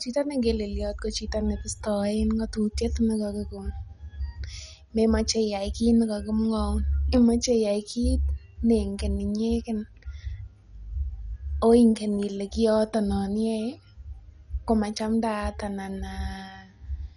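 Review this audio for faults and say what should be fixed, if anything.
The speech appears to have passed through a starved MPEG Layer II encoder, likely MP2 compression at a low rate, consistent with around 48 kbps, throughout the clip. With so few bits shared among its 32 sub-bands, the upper bands are dropped entirely, leaving nothing above 11.3 kHz, while the remaining bands flicker in and out and are coarsely quantised. The result is plainly audible: a dull tone with a gurgling, granular roughness. To prevent this, encode from the original source at a higher bitrate or use a more efficient codec.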